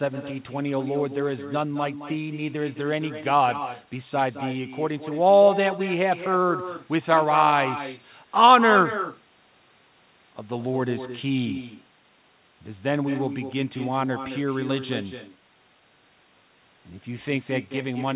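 Speech with an echo with no canceller, running the whole way through. Every phrase returns about a fifth of a second later, roughly 11 dB quieter and thin. The far end's loudspeaker feeds its microphone, and nothing removes that copy. The call path's 4 kHz ceiling points to a narrowband codec such as G.711.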